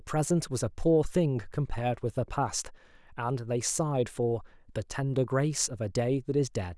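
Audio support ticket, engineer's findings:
Engineer's findings: no audio fault found in this speech recording, and no component implicated.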